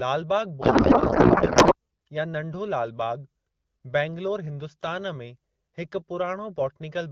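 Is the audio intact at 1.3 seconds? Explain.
No. A codec payload misread runs from 0.61 to 1.75 s. The decoder unpacks the AMR-WB frames with their fields misplaced, which fits octet-aligned packing being read as bandwidth-efficient. The speech there turns into garbled noise and warble that barely tracks it.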